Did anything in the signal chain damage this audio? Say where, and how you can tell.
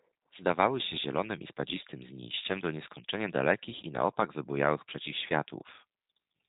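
Yes. G.729 codec damage runs through the whole clip at the codec stage. The speech sounds slightly rough and synthetic, and nothing above 3.8 kHz survives. This fits 8 kbit/s G.729A, which rebuilds each 10 ms frame from a vocal tract filter, pitch prediction and a few pulses.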